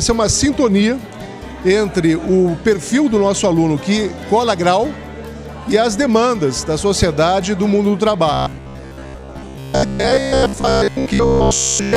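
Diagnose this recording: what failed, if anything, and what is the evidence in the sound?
Robotic sound from repeated short buffers, 8.33 to 11.96 s: a 66.7 Hz buzz, likely from buffer underruns looping 15 ms chunks, showing identical waveform cycles and evenly spaced spectrogram harmonics.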